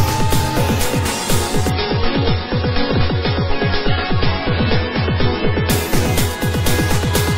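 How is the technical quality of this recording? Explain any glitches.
The recording has one clear fault, an adaptive stream at a lower bitrate, running from 1.70 s to 5.70 s. At 1.70 s the quality drops abruptly with no gap in the audio: the treble is cut, with nothing above 5.5 kHz, and codec artefacts become more prominent. The stream has fallen back to a much lower-bitrate version, which fits a switch from roughly 128 kbit/s MP3 to about 16 kbit/s, likely because the connection slowed. At 5.70 s the higher bandwidth returns just as suddenly.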